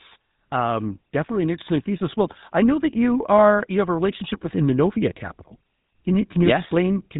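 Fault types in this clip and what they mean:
GSM full-rate codec: A buzzy, gravelly roughness runs through the whole speech clip, with nothing above about 3.8 kHz, because this early mobile codec rebuilds the voice from a vocal-tract model fed by coarse, regularly spaced pulses, which fits a 13 kbps GSM stream.
Automatic gain rising: From 0.4 to 2.26 s, just before "I know that you", voice and background swell together by about 5 dB, as the automatic gain control judges the input too quiet and raises its gain gradually over nearly two seconds.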